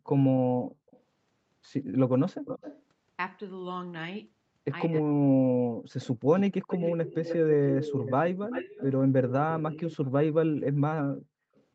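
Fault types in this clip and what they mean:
Echo leak: A delayed copy of the speech trails it, sometimes in brief scraps and sometimes for a second or more. It lags by 184 to 304 ms and sits about 10 to 40 dB below. The likely cause is a far-end loudspeaker echo the canceller failed to remove.
Speech suppressed in double talk: Between 4.88 and 6.5 s the speech dips and drops out in pieces, by as much as about 40 dB, for roughly a second in total. Likely an echo canceller turning both sides down while the other party talked over it.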